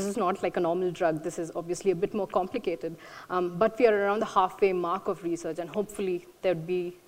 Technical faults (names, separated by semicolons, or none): none